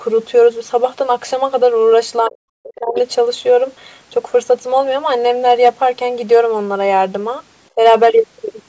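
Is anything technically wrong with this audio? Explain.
Yes. From 2.23 to 2.96 s the speech sinks, by as much as roughly 40 dB at its deepest, likely speech suppressed in double talk, with the echo canceller ducking the talker while the far side spoke.

Right after, from 2.95 to 3.0 s, a faint second voice slips through about 15 dB under the talker, likely the other side's voice leaking through as uncancelled loudspeaker echo.

Crackle hits the louder syllables at 5.48 to 5.69 s, 6.33 to 6.38 s and 7.85 to 8.19 s. This is hard clipping: peaks overdriven by about 4, 2 and 4 dB were sliced flat.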